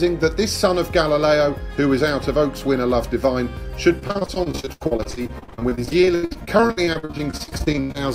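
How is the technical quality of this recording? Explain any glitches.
The quality breaks down in the second half, where repeated packet loss (robotic sound) runs from about 3.99 s to 7.96 s. Over this stretch 57 separate gaps open up, the longest 89 ms. Each is patched by stretching the preceding sound forward, so about 1.5 s is filled in and roughly 39 percent of the span is concealed. The result is choppy audio with pieces missing. Unlike a single dropout, the holes keep recurring in quick succession.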